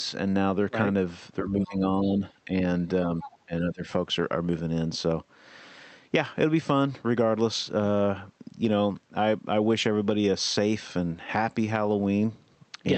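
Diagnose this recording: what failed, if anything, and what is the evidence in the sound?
Speech suppressed in double talk, at 1.43 to 1.85 s, 2.02 to 2.67 s and 3.46 to 3.91 s. The speech sinks by about 15 dB in the first two stretches and by about 20 dB in the third, then recovers. The stage is call processing. The likely cause is the echo canceller. When the far end spoke at the same time, it could not tell the near talker from loudspeaker echo, so it turned everything down to be safe.

Other side's voice leaking through, at 3.22 to 3.38 s. A brief second voice appears, sitting about 15 dB below the main speech, just before the third suppression. This points to call processing again: the far-end signal played on the loudspeaker was picked up by the microphone. The likely explanation is that the echo canceller's estimate of that path fell short, so part of the echo went out uncancelled.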